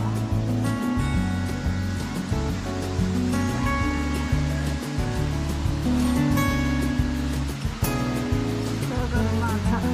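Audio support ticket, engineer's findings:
No faults found on playback.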